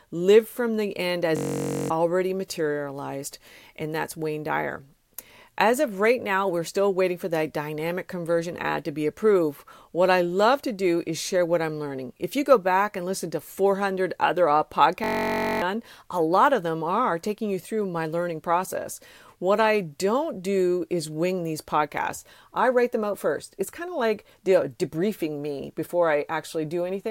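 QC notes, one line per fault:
1.37–1.90 s and 15.04–15.62 s, system hang loop. Each time the speech freezes into a steady buzz near 47 Hz. The playback side stalled, but the hardware kept replaying one 21.3 ms slice of its ring buffer. That 1024-sample slice repeats about 25 times in the first event and 27 in the second. About half a second of speech is lost at each point.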